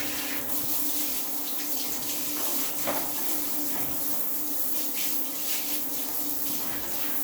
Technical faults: none

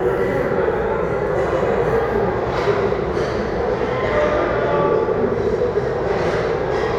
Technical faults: none

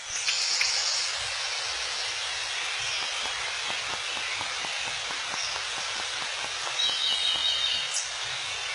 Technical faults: HE-AAC compression; train of clicks

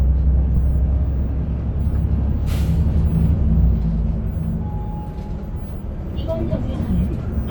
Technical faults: corrupt frame decoded

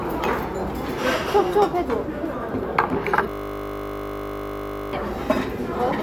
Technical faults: system hang loop

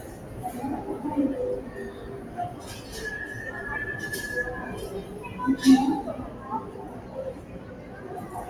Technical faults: noise suppressor applied to music or sounds; sound cut by the noise suppressor

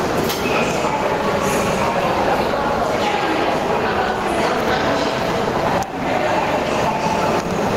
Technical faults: gain pumping

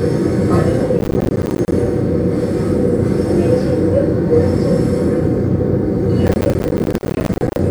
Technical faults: processor overload crackle

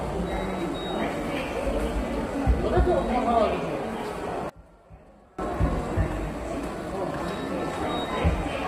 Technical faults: low-delay AAC compression; one channel inverted

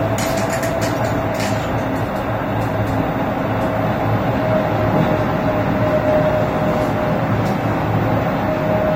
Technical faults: AAC compression

